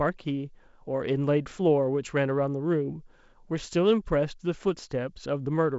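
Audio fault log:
No faults heard in this wideband speech recording.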